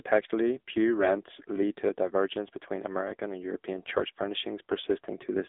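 From start to finish the speech runs through the AMR narrowband mobile codec, the old 2G/3G phone coder, and it's heavily damaged. The band is squeezed to roughly 250 Hz to 3.6 kHz, with nothing at all above 3.8 kHz, so it's thin and boxy. The voice comes out buzzy and synthetic because the codec rebuilds it from a vocal-tract model fed by only a few pulses, which fits a low mode around 6.7 kbps.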